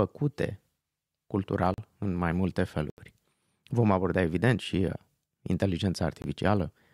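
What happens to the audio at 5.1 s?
Nothing goes wrong at 5.1 s; the speech continues intact through that moment with no audible fault.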